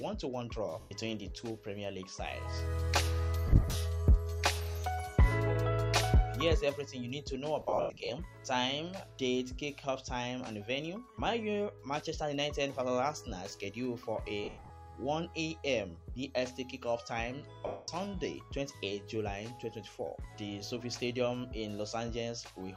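Lost LE Audio frames break the sound five times: a solid gap at 0.80 to 0.91 s, scattered dropouts from 3.47 to 3.75 s and again at 7.61 to 8.09 s and 14.44 to 14.70 s (runs up to about a tenth of a second), and a solid 210 ms loss at 17.67 to 17.88 s. The LC3 decoder patches each hole by repeating the last spectrum with randomised phase signs, so tones become a hissy smear that fades on the longer runs. On a spectrogram, clean harmonic lines give way to blurred, uniform noise bands that thin toward silence. In the waveform, the envelope turns ragged and decays.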